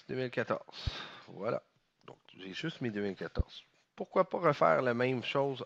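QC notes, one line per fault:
0.87–0.90 s and 3.39–3.43 s, loud pop: two single sharp pops, each around 10 dB above the surrounding level, with the sound continuing underneath. Each is likely a brief voltage step or pulse, from a plug, switch, static or driver glitch, shaped by later circuitry into a thump.
4.79–5.66 s, Bluetooth SBC bit pool drop: the treble goes dull and a gritty graininess rises through the final stretch. This fits the link cutting the SBC bit pool from 31 to 15, roughly 105 kbps, leaving upper sub-bands starved and the rest coarsely quantised.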